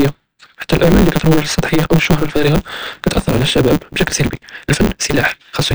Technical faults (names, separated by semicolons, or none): block size mismatch (truncated)